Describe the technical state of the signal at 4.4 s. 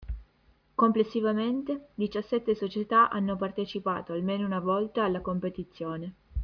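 At 4.4 s the speech carries aliasing, as it does across the whole clip. The sound appears to have been reduced to a rate near 11 kHz without an anti-alias filter, so energy above the 5.5 kHz fold reflects back down to unrelated frequencies, sitting very roughly 35 dB below the signal. Sibilants come out gritty and metallic. On a spectrogram the content runs hard up to 5.5 kHz, with mirrored, misplaced components below it.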